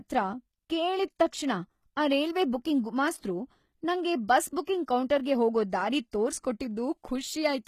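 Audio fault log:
throughout, HE-AAC compression: the treble sounds bright but grainy and metallic, with sibilants turning gritty and nothing above 14.9 kHz. The likely cause is replicated upper bands, copied from below and coarsely shaped, which fits a low bitrate around 20 kbps.
4.64–4.67 s and 6.11 s, pre-echo: a brief hiss, lasting 28 ms and then 18 ms, creeps in just ahead of sharp attacks, which sound softened. Codec noise spread across each block fills the quiet moment before the onset.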